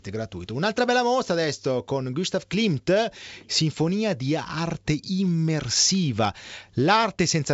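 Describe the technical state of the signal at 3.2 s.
At 3.2 s the speech is intact, with no fault at that moment, carried through G.722 wideband telephone coding at 64 kbit/s with nothing above about 7.7 kHz.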